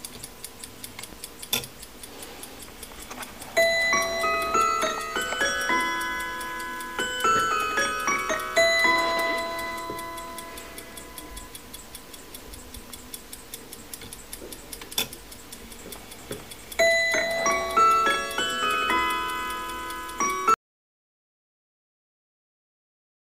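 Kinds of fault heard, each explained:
Audio dropout to silence: at 20.54 s the sound cuts off mid-flow and never comes back, leaving about 2.8 s of dead silence right to the end. There's no room tone or background hiss in that stretch, just nothing, so it isn't a quiet passage. Likely the input was lost, through a disconnected device, a failed link or an accidental mute, while recording carried on writing silence. Whatever happened after the cut is gone.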